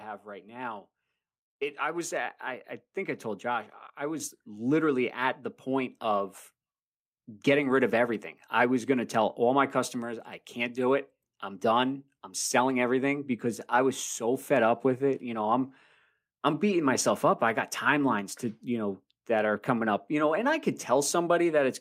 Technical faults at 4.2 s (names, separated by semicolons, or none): microphone volume stepped up